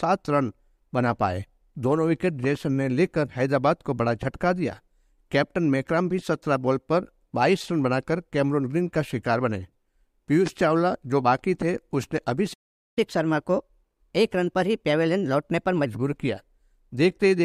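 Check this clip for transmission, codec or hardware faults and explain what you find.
Two playback faults occur together near the end of the clip.

A playback stall runs from 12.53 to 12.98 s: the sound cuts out mid-flow for about 0.43 s. The likely cause is the player running short of buffered data or its output thread being blocked, leaving nothing to send until it recovers.

Catch-up at higher speed follows from 12.98 to 15.86 s. The player works through its backlog by resampling at 1.15 times normal speed, so tempo and pitch both rise, by about two semitones, then settle back once the lost time is regained.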